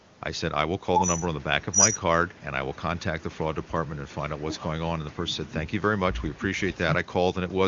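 No technical faults can be heard anywhere in the speech. It carries the band limit of the AMR wideband (HD Voice) codec, with nothing above about 7.5 kHz, and the coding sounds clear enough to point to one of its higher rates, around 24 kbit/s.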